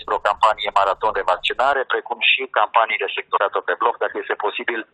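At 1.74 s the input was likely switched to a poorer device, and the band collapses to nothing above 3.8 kHz until the end. The sound turns dull and boxy with no gap at the switch, the level holds steady, and a faint new noise floor sits far below.

From 3.36 to 3.38 s a stream segment was likely skipped, with the player jumping to the next chunk of the stream. The sound lurches forward with a small blip, and the part that should have followed is simply gone.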